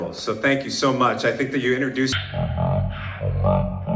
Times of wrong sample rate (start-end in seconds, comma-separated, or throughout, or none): 2.12-3.96